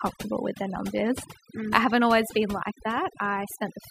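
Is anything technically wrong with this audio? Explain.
Yes. Throughout the speech there is overdone noise removal. A noise reduction process has been pushed too hard, so individual frequency bands are pulled down or shut off whenever their level sits close to what the tool judged to be noise, and the softer parts of the voice are removed along with the noise. The pauses fall to near silence dotted with twinkling, chirpy specks. Those isolated specks in otherwise dead gaps set it apart from a plain low-pass filter or a noise gate, which would dull the sound or cut it in whole blocks rather than leave scattered tonal fragments.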